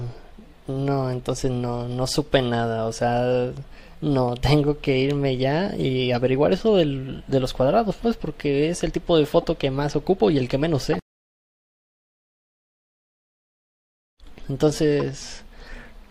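Corrupt frame decoded at 9.42 to 9.44 s, 10.93 to 10.96 s and 15.00 s: damaged compressed frames were played anyway, misplacing energy into short chirps or noise bursts. The middle one, spanning what sounds like a few frames, peaks near -10 dBFS; the others sit near -25 dBFS.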